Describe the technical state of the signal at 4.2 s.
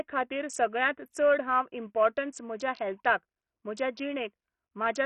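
At 4.2 s you're hearing the same damage that runs through the whole speech clip: likely Bluetooth SBC compression at a starved bitrate, roughly 48 kbps. Too few bits reach the upper sub-bands, so the treble flickers and a gritty, aliased grain sits over everything.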